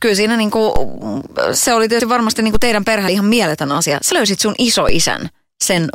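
At 0.76 s, right after "kyllä siinä niin kuin", the zero line of the waveform jumps to a new offset. This is a DC step, and it sounds like a low thump under the speech. The offset does not hold. It drains away slowly, the way a 2 Hz high-pass filter would pull it back. Just after that, at 0.96 s, before "se oli", the capture program likely failed to read its samples before the hardware overwrote them. This dropped buffer (overrun) removes about 40 ms and joins the two sides directly, so the speech jumps forward with no gap of silence. The same skip happens at 2.0 s, losing about 70 ms. At 2.55 s, between "varmasti niin" and "kuin teidän", a second DC step gives another thump, which again decays. More overruns follow at 3.08 s, with about 70 ms gone, and at 4.12 s, with about 40 ms gone. Each is a jump in the speech. The last DC step, at 4.89 s, is one more low thump that fades the same way.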